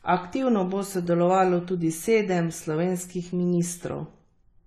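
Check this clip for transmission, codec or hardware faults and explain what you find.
The speech shows one codec fault, present throughout the clip. AAC compression is the likely cause: nothing is heard above 13.4 kHz, and the speech is dull and smeared, with a fizzy, warbling texture on sibilants. The encoder has stripped the high band and coarsely quantised the rest, which points to a low bitrate of around 32 kbps.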